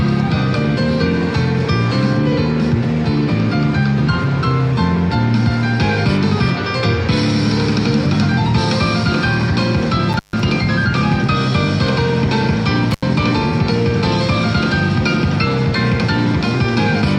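At 10.12 and 12.91 s, an intermittent contact opens for about 135 and 82 ms. Sound drops to faint hiss, with crackle spikes bracketing each near-flat gap in the waveform.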